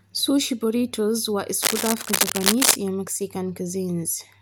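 From 1.63 s to 2.76 s, cable scratch noise runs across the speech: a dense, irregular rasp of scratching and rustling, roughly as loud as the speech itself. The likely cause is a worn cable, connector or control being moved, its contact resistance fluctuating rapidly. Unlike a steady hiss it comes in uneven bursts, and unlike isolated digital clicks or dropouts it is a continuous churning texture that stops once the movement ends.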